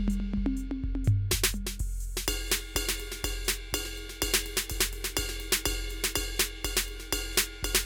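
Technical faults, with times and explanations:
Nothing in this music stood out as a technical fault on listening.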